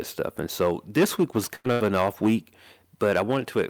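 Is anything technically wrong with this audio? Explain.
Yes. Hard clipping runs throughout: the speech drives about 9 dB past the level the chain can pass, so a few percent of peaks are sliced flat, giving crackle on loud syllables rather than the steady hiss of noise. A burst of packet loss strikes twice, from 1.55 to 1.67 s and from 1.72 to 1.83 s. Each time roughly 80 ms of speech is lost, and the receiver stretches the last sound into a fading buzz or hiss before jumping ahead. That fill is what separates it from a plain dropout to silence.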